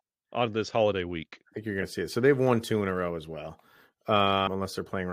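Compressed frames skipped at 1.81 s, right after "think you're", and at 4.46 s: the audio jumps ahead about one frame, then about five, which fits a roughly 23 ms frame.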